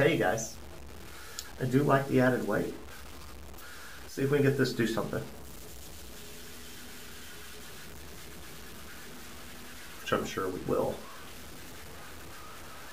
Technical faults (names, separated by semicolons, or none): low bit depth without dither